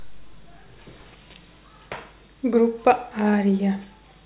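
Speech recording, no technical faults detected.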